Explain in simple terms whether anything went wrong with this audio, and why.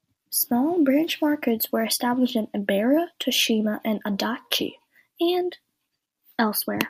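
Nothing went wrong here: the speech recording comes through intact, with no dropouts, interruptions or other technical faults anywhere along its length.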